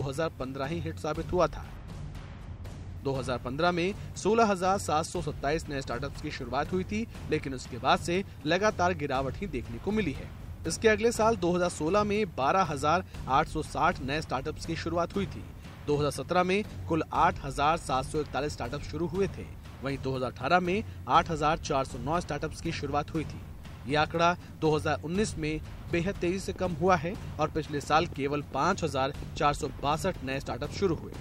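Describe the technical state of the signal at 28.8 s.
At 28.8 s a train of clicks runs from 26.56 to 31.17 s: irregular ticks near 10.9 per second, peaking about level with the signal, likely from electrical interference.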